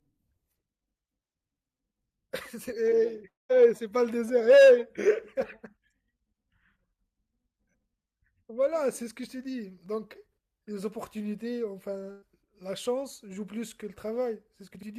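Short concealed packet loss at 2.89 to 2.93 s: about 20 ms of the speech failed to reach the decoder in time, and the receiver bridged most of the hole, roughly 18 ms, by extending the sound just before it, following its pitch where voiced or as shaped noise where not, before blending back into the real signal. The result is a brief smear or wobble in the voice rather than an audible gap.

Long network dropout at 3.27 to 3.51 s: the speech breaks off and is replaced by a continuation of the preceding sound, a buzz or hiss that dies away, leaving about 170 ms of near-silence before the voice returns. Around 220 ms of real audio is missing, and the talker resumes further along than where they stopped. This is likely a stretch where no audio arrived at all, with the receiver padding the gap and then giving up.

Burst of packet loss at 12.11 to 12.24 s: about 120 ms of consecutive audio was lost or arrived too late to play, more than one short packet's worth, pointing to a run of losses. 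The receiver filled roughly 110 ms by holding the last sound and turning it down as the gap went on, with no fully silent stretch, so it comes across as a held buzz or fading hiss. The speech then picks up beyond the missing section.

Chunks out of order at 14.75 to 14.83 s: a 20 ms chunk of audio arrived or was written late and plays after the three chunks that should have followed it. Nothing is lost, but the sequence is scrambled, creating three hard joins where the waveform doesn't line up. It is heard near the end of the clip as a brief garbled, jumbled moment.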